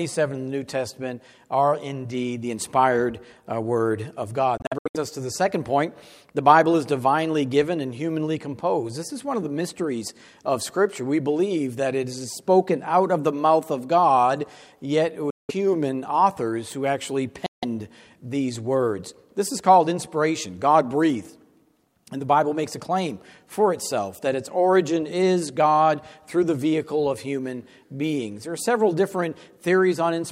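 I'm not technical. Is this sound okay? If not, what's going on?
No. The sound cuts out briefly three times: a stutter of short gaps from 4.57 to 4.97 s, then gaps from 15.30 to 15.51 s and 17.46 to 17.65 s, with the sound carrying on as if it never stopped. These are Bluetooth dropouts, likely from the wireless link losing bits of audio on the way to the headphones.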